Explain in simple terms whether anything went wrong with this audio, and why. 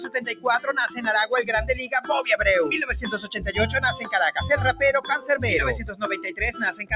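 Throughout the clip the level keeps swelling and sinking, so held sounds flutter and thin out. That's a noise suppressor applied to music or sounds: a speech filter mistaking steady sound for noise.

At 0.05–0.71 s, 3.23–3.42 s and 5.84–6.41 s the sound dips noticeably quieter. This is sound cut by the noise suppressor, which turned those stretches down as though they were background noise.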